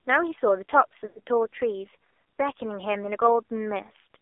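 Throughout, the speech has passed through an AMR narrowband mobile codec at a very low rate. The phone line allowed only 300 Hz to 3.6 kHz, and the vocal tract model was fed very few bits. The damage is heavy. The voice is thin and muffled, with nothing bright above the band, and it has a buzzy, synthetic edge. That is consistent with one of AMR-NB's lowest modes, around 5.9 kbps.

From 1.08 to 1.19 s come lost AMR speech frames. Radio errors corrupted a run of frames, so the decoder had no fresh data for about 80 ms, which fits four consecutive 20 ms frames. It kept repeating its last good pitch and vocal tract settings at falling gain. The sound there stretches into a smeared, droning continuation that sags in level and then fades toward silence before speech resumes, weak or rough for a moment.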